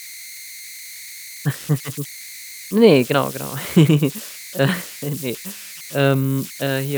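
Converter idle tones run through the whole speech clip. Without dither, the delta-sigma converter settles into repeating bit patterns whenever its input is small, and those patterns form a whistle around 2 kHz, at about 18 dB below the signal, heard in pauses and as a grainy edge under quieter passages. Unlike mains hum, it sits high rather than at low harmonics, and its pitch is set by the input's offset instead of the supply frequency.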